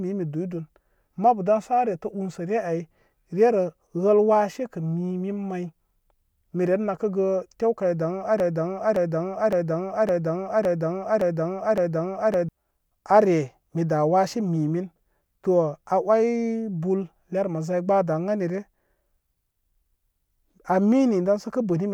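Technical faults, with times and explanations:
8.4–12.49 s, broken-record loop: just after "nakəgə tew kaw dan", a 0.56 s fragment of speech repeats exactly, seven times back to back, and whatever should have played is lost. Identical repeats with no gap set it apart from an echo or stutter; likely a stalled player resending its last buffer.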